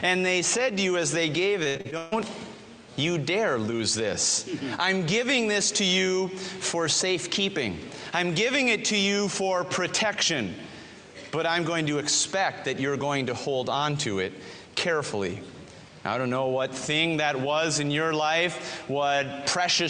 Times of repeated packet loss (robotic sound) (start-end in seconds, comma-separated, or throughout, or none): 1.63-2.14